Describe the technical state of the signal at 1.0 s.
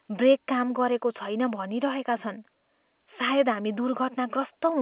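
At 1.0 s the speech is intact, with no dropout, click or distortion, and it still carries the narrow telephone band of A-law G.711 coding, with nothing above 4 kHz and a faint noise floor that follows the level of the speech.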